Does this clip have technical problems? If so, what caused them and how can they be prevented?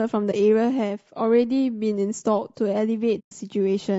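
Yes. Throughout the clip the speech sounds rough and grainy, with a hiss-like fill between the harmonics and a thin, synthetic top end. This is plainly audible low-delay AAC compression, likely AAC-ELD at a low bitrate around 32 kbps. Its short frames resolve pitch harmonics poorly, so at that rate the encoder cannot spend enough bits to keep the voice clean. Raising the bitrate, or using a longer-frame codec where latency allows, would prevent this.

There are two soft-edged dropouts. The first, from 0.31 to 0.34 s, is a brief 20 ms hole. The second, from 3.19 to 3.32 s, is a longer 120 ms gap. Both come from AAC frame loss with muting. The decoder zeroed the missing frames, and the overlapping windows faded the sound out and back in. Using packet loss concealment, forward error correction or a larger jitter buffer would prevent these gaps.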